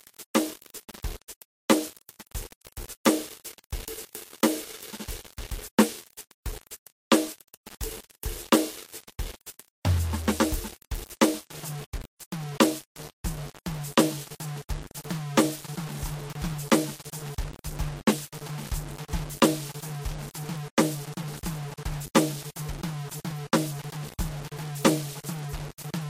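From the first moment to the end, the music carries a coarse, grainy distortion that rises and falls with the sound itself. This is low bit depth without dither: the waveform appears to have been rounded to only about 6 bits, likely with no dither added. The error sits roughly 15 dB below the music, so quiet passages turn gritty and faint tails sputter. A zoomed-in waveform would show visible stair-steps, and a spectrogram would show a noise floor that moves with the music.

Running through the whole clip alongside this is the layered artefact character of transcoding between lossy codecs. The music seems to have passed through an MP3 stage at 66 kbit/s and then a Vorbis stage at 46 kbit/s. The quality suggests bitrates somewhere in the 40 to 70 kbit/s range, which is likely the cause. The second codec spends its bits on the first codec's artefacts and adds artefacts of its own, so both kinds of damage are heard together. 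On a spectrogram the content stops at a hard ceiling at 16.6 kHz.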